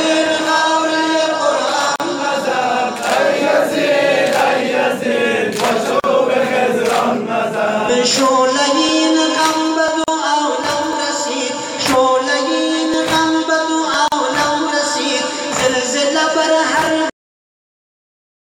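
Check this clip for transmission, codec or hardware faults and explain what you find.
Three kinds of fault are present: silent gaps at joins of encoded pieces, periodic USB or driver dropouts, and a cut-off end.

Gaps at a join of encoded pieces appear at 1.96, 6.00, 10.04 and 14.08 s, each about 40 ms long and spaced about 4 s apart. Each piece was encoded on its own and joined untrimmed, so the encoder's start-up delay and last-frame padding remain as a brief hole. The sound stops abruptly, with edges blurred by the codec, then resumes where it left off. Unlike a driver dropout, each gap is a silence tied to segment boundaries rather than a tiny tick.

Periodic USB or driver dropouts run from 6.89 to 13.94 s, about seven of them, roughly once per second. A background task stalls the USB bus or audio driver at that interval, and about a millisecond of audio is skipped each time rather than replaced with silence. 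Each one sounds like a small tick or pop in the running signal. What separates these from the join gaps is their length and spacing: they are far shorter, recur every second instead of every 4 s, and remove audio instead of inserting silence.

The cut-off end comes at 17.10 s, where the audio stops mid-sound and falls straight to digital silence with no decay. The final buffers were never written or played out, so the sound is truncated rather than faded. A natural ending would let the sound ring out or taper. This one ends instantly, partway through ongoing material, and stays silent from there to the end of the file.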